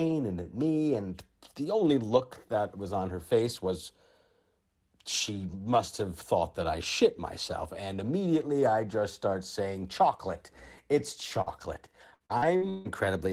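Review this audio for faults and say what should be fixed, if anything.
Burst of packet loss at 11.41–11.49 s: the receiver lost a short run of packets and covered about 50 ms by extending the last bit of speech and fading it, which leaves a held buzz or dying hiss. It then jumped ahead, so roughly 40 ms of speech is simply gone when the audio resumes. To prevent it, add jitter-buffer headroom and use a less congested network path.

Lost packet rebuilt from error correction at 11.46–11.48 s, inside the burst above: one 20 ms packet arrived only as the low-bitrate backup copy carried by the next packet, so the decoder played that copy instead of a gap. The result is continuous but audibly rougher and noisier for that frame than the surrounding speech. To prevent it, reduce the underlying packet loss so the decoder rarely needs the backup copies.

Repeated packet loss (robotic sound) from 12.14 to 12.87 s: five separate holes landed within under a second, the longest 158 ms. 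About 340 ms was patched by continuing the previous sound, close to half the span, and another 340 ms is missing outright. A small portion, around 70 ms, came back through error correction. The back-to-back concealment gives choppy speech with pieces dropped. To prevent it, fix the sustained loss on the link, for example congestion or a weak wireless connection, and raise the error-correction redundancy.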